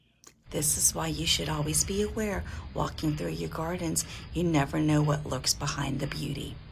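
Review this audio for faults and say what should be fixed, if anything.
I found no faults, so nothing needs to be fixed.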